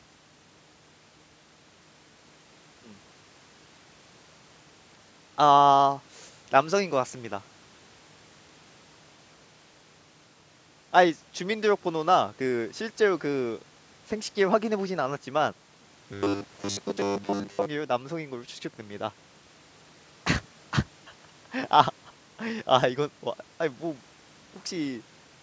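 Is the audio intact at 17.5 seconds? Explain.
No. From 16.13 to 17.66 s there is robotic sound from repeated short buffers: a rigid, metallic 100 Hz buzz, likely from 10 ms buffers looping while most real audio is skipped. Unlike a stutter, it still roughly tracks the speech.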